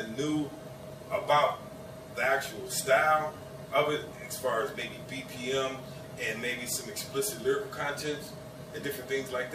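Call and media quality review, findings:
Audio missing between chunks: brief skips at 0.83, 4.82 and 6.81 s, each a few milliseconds lost, the two sides joined with no silence. The skips fall on a 2 s grid, likely a recorder or processor dropping samples at chunk boundaries. That fixed spacing distinguishes it from random packet loss.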